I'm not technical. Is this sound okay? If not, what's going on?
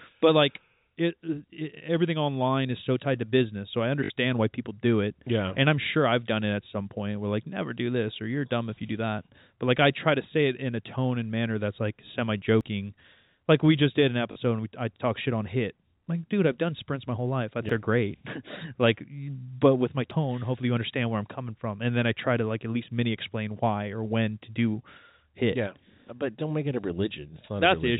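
No. Twice, pieces of the sound were lost in transit and the player filled each gap by repeating the last piece it had. This is packet loss with the last packet repeated. At 4.04 to 4.10 s (60 ms) and 14.32 to 14.36 s (40 ms) you hear a brief robotic stutter.

Three other times, the recording software most likely did not collect the sound in time, so a small chunk was overwritten and discarded. This is a dropped buffer, or overrun. At 12.61, 17.69 and 20.11 s the sound skips ahead, losing a short moment each time, a bit longer at 17.69 s.

The narrow, phone-like quality comes from ordinary G.711 telephone coding, which cuts off everything above 4 kHz.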